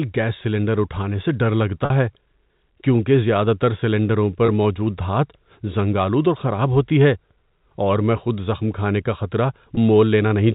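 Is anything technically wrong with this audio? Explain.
Yes. The speech briefly freezes into a held, buzzy tone at 1.85 to 1.90 s (50 ms), 4.46 to 4.48 s and 9.75 to 9.77 s (20 ms each). This is packet loss with pitch repetition. The receiver bridges each gap by repeating the last pitch period, which fits a handful of lost packets.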